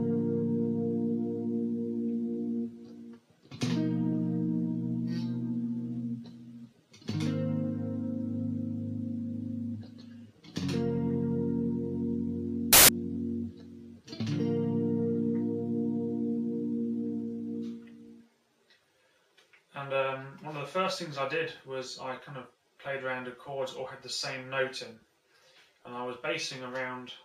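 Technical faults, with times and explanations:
12.73–12.89 s, file tags played as audio: an embedded cover picture's compressed bytes decoded as samples, giving a hard-edged 0.16 s burst of very loud white noise rather than a decoding glitch.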